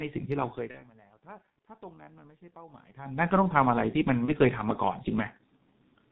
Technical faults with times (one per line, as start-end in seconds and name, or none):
0.00-6.11 G.723.1 codec
0.71-0.84 VoIP packet loss concealed by the speech codec
4.25-4.34 VoIP packet loss concealed by the speech codec